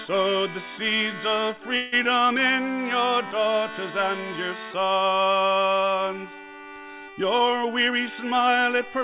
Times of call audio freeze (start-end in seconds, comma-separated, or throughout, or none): 1.76-1.94